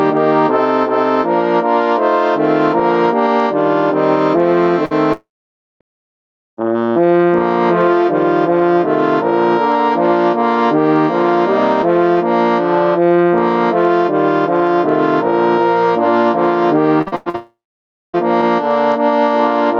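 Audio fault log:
Throughout: gain pumping. The level swings by about 10 dB. Loud and quiet parts sit closer together than they should, so the sound feels squashed. The likely cause is input gain set far too high, with a fast limiter or compressor pulling it back down on each peak. The whole clip is also band-limited to 8 kHz.
4.85 to 4.93 s: burst of packet loss. A short hole of roughly 53 ms was patched by stretching the last sound, and about 60 ms of audio went missing. It comes across as a brief held buzz or hiss that fades. The audio then resumes slightly further on, with a small piece missing. Several packets in a row arrived too late or not at all. The receiver filled the gap by continuing what it had last played.
5.13 to 5.82 s and 17.36 to 18.15 s: long network dropout. Each starts with a fading continuation of the last sound, then goes silent for most of the stretch. That is about 560 ms of silence in the first and about 580 ms in the second. 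About 680 ms and 780 ms of audio are lost. Playback picks up later without the missing part. A network outage is the likely cause, with the receiver running out of audio to conceal.
16.98 to 17.36 s: repeated packet loss (robotic sound). Five holes follow each other closely, the longest about 100 ms, and about 240 ms goes missing in all. Concealment covers about 62% of this span, so the sound turns choppy. Each gap is patched by repeating the last sound before the next gap arrives. The stretch runs straight into the second dropout.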